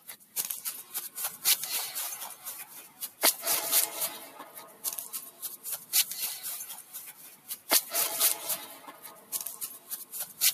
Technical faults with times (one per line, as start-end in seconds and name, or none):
0.00-10.54 noise suppressor applied to music or sounds
0.00-0.36 sound cut by the noise suppressor
2.66-3.21 sound cut by the noise suppressor
4.50-4.84 sound cut by the noise suppressor
5.28-5.92 sound cut by the noise suppressor
6.81-7.69 sound cut by the noise suppressor
8.74-9.32 sound cut by the noise suppressor
9.75-10.13 sound cut by the noise suppressor